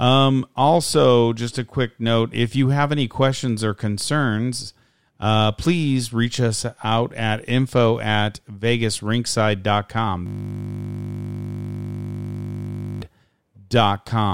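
From 10.26 s to 13.02 s the speech gives way to a steady, mechanical buzz pitched at 50 Hz. It is a system hang loop: the computer or its audio driver stopped supplying new samples, and the sound hardware kept replaying the same 20 ms stretch of its ring buffer, well over a hundred times in a row. A loop that short repeats too quickly to be heard as a stutter, so it fuses into a continuous tone.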